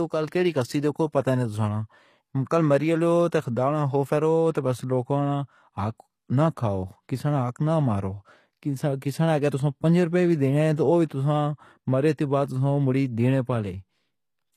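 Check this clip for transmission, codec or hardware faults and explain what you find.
One fault is present, and it runs through the whole speech clip: the treble has the synthetic character of HE-AAC compression. Nothing exists above 14.9 kHz, and the upper band sounds rebuilt rather than captured. The likely cause is spectral band replication at a low bitrate, around 24 kbps, where only the lower spectrum is coded and copied upward under a coarse envelope. The damage is plainly audible: sibilants come out gritty and lispy, with a metallic sheen that doesn't sit in line with the lower harmonics.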